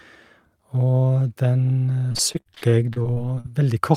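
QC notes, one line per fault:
2.09–3.46 s, repeated packet loss (robotic sound): the stream keeps losing or receiving late packets in quick succession. Each hole, the longest about 50 ms, is papered over by stretching the preceding sound, so roughly a quarter of this stretch of speech is concealment rather than real signal. The gaps arrive before the repairs can settle, so the speech turns choppy, with fragments missing.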